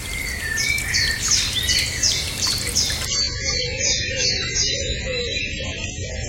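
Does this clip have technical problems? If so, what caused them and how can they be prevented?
Yes. From 3.06 s to the end of the clip, the sound switches abruptly to an adaptive stream at a lower bitrate, with no gap. This happens when a slowing connection forces the player onto a cheaper encoding, here one that fits a drop from about 96 to 12 kbit/s AAC. Codec artefacts increase and nothing remains above 7.6 kHz. On a spectrogram, the upper band cuts off sharply at 3.06 s, while the waveform runs on unbroken. To prevent it, use a steadier or faster connection, or set the player to a fixed high-bitrate rendition.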